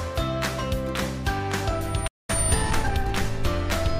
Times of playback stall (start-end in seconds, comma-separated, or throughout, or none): 2.07-2.30